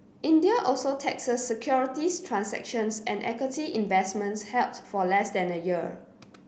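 Nothing goes wrong anywhere in this speech recording; there's simply no technical fault to point to.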